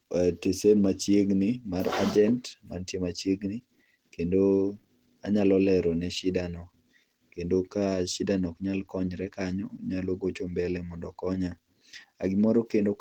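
Throughout, speech sounds muffled, hoarse and grainy, likely Opus compression, consistent with hybrid mode at 16 kbps; the spectrogram shows noise-filled bands stopping near 20.3 kHz.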